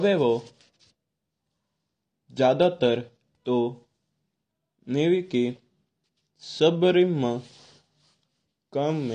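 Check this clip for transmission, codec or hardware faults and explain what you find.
The speech carries one codec fault, AAC compression, present from start to finish. Nothing survives above about 9.8 kHz, and the damage is plainly audible. The likely cause is AAC-LC at a low bitrate, consistent with roughly 32 kbps: the encoder spends its few bits on the strongest bands, drops or noise-fills weaker ones and lowers the cut-off. Sibilants and sustained vowels sound dull, smeared and fizzy. A simple low-pass filter would dull the top without adding warble or texture.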